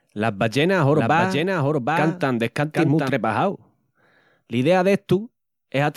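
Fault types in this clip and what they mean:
Doubled audio track: from 0.94 s to 3.10 s, a second full-band copy of the speech runs about 0.7 s behind the original and roughly 5 dB quieter, so each syllable returns as a distinct, dry repeat with no decay or room colour. It begins and ends abruptly within the clip. The likely cause is the signal being picked up a second time through a slower path, or an edit holding two misaligned copies.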